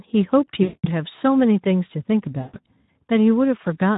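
Across the whole clip the speech carries Speex codec damage: a hoarse, noisy grain from the starved CELP excitation, which fits a Speex setting near 11 kbps. On a spectrogram the harmonics look smeared, and any band above 4 kHz is only a diffuse, noise-like wash.

From 0.63 to 0.86 s, and again from 2.41 to 2.57 s, VoIP packet loss concealed by the speech codec takes over. The decoder stretches its last pitch and filter into a buzzy tone or coloured noise that fades, and the voice stays thin briefly after each gap. The waveform shows a decaying envelope.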